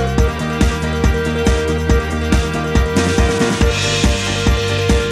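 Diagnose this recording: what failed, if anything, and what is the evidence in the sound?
Nothing in the recording points to a failure anywhere in the signal chain. No stage, from capture through to playback, leaves an audible mark on the sound.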